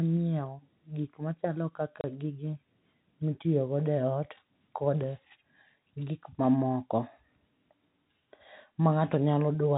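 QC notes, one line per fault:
2.01–2.04 s, packet loss filled with silence: just after "nyiewo gik machalo" the speech cuts to a 30 ms hole with hard edges, which fits a single lost packet. The receiver played silence there instead of concealing the gap, so the waveform snaps abruptly to silence and back.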